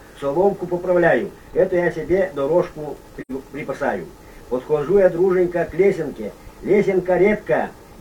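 AAC frame loss with muting: the decoder zeroed the missing spectrum, leaving a soft-faded hole in the audio from 3.21 to 3.31 s, which fits two lost frames.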